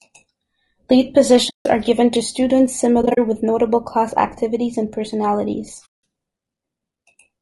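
Throughout the speech, the voice sounds rough and grainy. Noise fills the gaps between harmonics, and the top band sounds thin and synthetic. This is plainly audible codec damage, likely from low-delay AAC compression (AAC-ELD) at about 32 kbps. Its short frames resolve pitch poorly. At this bitrate, too few bits remain to keep the harmonics clean.

From 1.49 to 1.66 s, just before "are given to students", the sound fades out and back in. This is AAC frame loss with muting. The decoder zeroed the missing frames, leaving about 160 ms of silence. The overlapping windows soften its edges. From 3.01 to 3.19 s, after "are given to students" and before "with notable class activities", the losses are scattered. About 100 ms is missing across 160 ms, in brief dropouts of up to roughly 40 ms. From 5.85 to 6.01 s, after "class activities and personalities", a soft-edged gap of about 180 ms falls silent.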